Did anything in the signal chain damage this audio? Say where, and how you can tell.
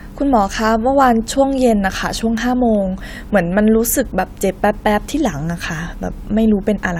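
No, nothing in this speech recording stood out as damage from the signal chain on listening.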